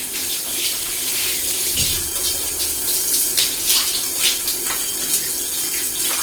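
Throughout this recording of sounds, tonal parts come across rough, grainy and hissy, as if fine noise had been woven into them, while the top end still reaches to about 20.1 kHz. That combination is likely Opus compression in its music mode. At a rate that fits roughly 16 kbps, the encoder keeps each band's energy but refills starved bands with noise or folded copies of lower ones. The result is grain rather than swirl, and the damage is plainly audible.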